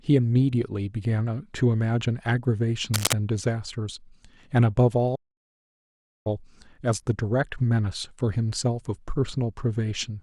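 At 2.94 s, a burst of cable scratch noise begins and lasts until 3.14 s. Dense, uneven crackling sits over the speech at roughly the same loudness. A worn cable or connector being moved is the likely cause, its contact resistance jumping rapidly.

At 5.15 s, a playback stall cuts the speech off mid-flow. Silence holds for 1.1 s, until 6.27 s. The player was likely starved of data or blocked. The sound then resumes after the gap.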